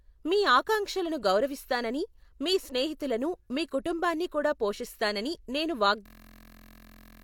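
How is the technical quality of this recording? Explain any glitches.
The recording has one serious glitch near the end. From 6.06 to 7.22 s, a system hang loop takes over. The computer or driver stalled while the sound hardware kept replaying one 23.22 ms slice of its buffer, about 50 times. That fits a 1024-sample buffer. It repeats at 43.1 Hz, so it sounds like a steady buzz. About a second of speech is lost.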